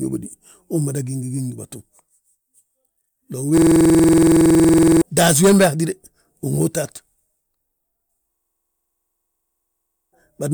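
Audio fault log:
3.58–5.02 s, system hang loop: a 46.44 ms slice repeats at 21.5 Hz, a rattling stutter before "taasí wembe". About a second and a half of audio is lost. The loop fits a frozen 2048-sample buffer.
8.36–10.12 s, system hang loop: the same 46.44 ms loop stutters again at 21.5 Hz. Roughly two seconds of audio are replaced.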